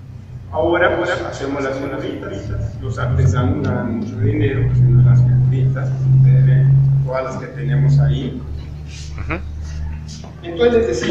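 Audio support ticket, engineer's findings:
Doubled audio track, 0.82–3.26 s: full-band copy trailing roughly 300 ms, about 5 dB down, no decay, abrupt start/stop. Likely slower second capture path or misaligned edit.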